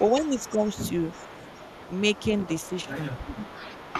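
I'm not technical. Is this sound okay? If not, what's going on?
No, not quite. There are two problems, both typical of phone or video calls.

First, an echo leak. From 0.0 to 2.91 seconds, and again from 3.08 to 3.94 seconds, a faint second copy of the voice trails the original by 366 milliseconds, about a third of a second. It is quiet, a little stronger in the later stretch. This is likely from someone using a loudspeaker. Their microphone picked the voice back up, and the echo remover didn't fully clean it out.

Second, speech suppressed in double talk. The voice briefly sinks from 0.14 to 0.38 seconds and from 0.54 to 0.62 seconds. Those dips are slight. From 2.68 to 3.05 seconds it drops much more clearly. The likely cause is both sides talking at once. The echo remover couldn't tell the real voice from the echo, so it turned everything down.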